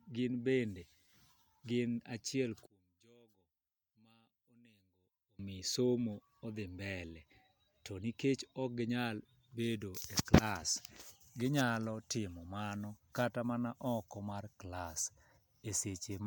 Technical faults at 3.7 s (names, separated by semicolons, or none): one channel inverted